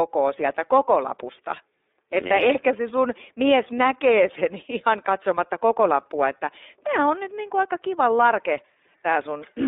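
iLBC codec damage runs throughout: speech is confined to roughly 250 Hz to 3.7 kHz, with a rough, synthetic edge consistent with 30 ms frames coded independently at about 13.3 kbps.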